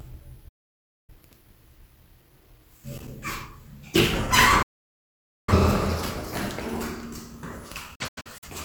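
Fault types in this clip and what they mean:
digital broadcast dropout: the receiver mutes when frames fail, so sound fades out over about 8 ms, leaving flat silent gaps in the waveform and blank spectrogram columns, the last as scattered short holes.
loose connector crackle: an intermittent contact chops the signal, giving brief irregular bursts near 3.0 s and 6.0 s, seen as spiky clusters and vertical broadband streaks.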